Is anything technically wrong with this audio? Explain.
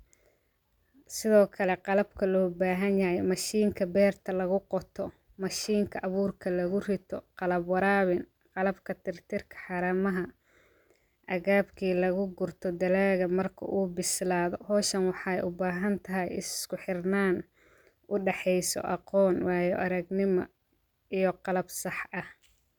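No technical faults are audible.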